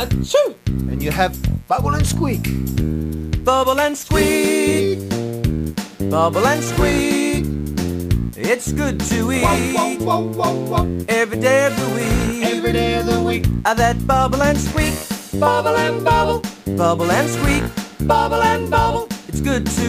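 Mains buzz runs throughout: sharp switching spikes twice per 60 Hz cycle spread harmonics into the kilohertz range, giving a steady, raspy buzz roughly 35 dB below the sound.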